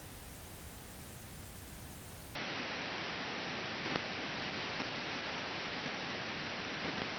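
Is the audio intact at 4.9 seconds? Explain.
No. From 2.35 s to the end, everything above 5.8 kHz is gone. The level drops by about 5 dB and a faint new noise floor appears, with no gap at the change. The likely cause is an input switched to a poorer device, which passes a narrower band. The sound is duller and boxier.

On top of that, a call bitrate drop runs from 4.36 s to 5.97 s. The encoder falls from 32 kbps to 17 kbps and stays near the bottom for about 1.5 s. With fewer bits it codes more coarsely, so the sound turns rough and watery.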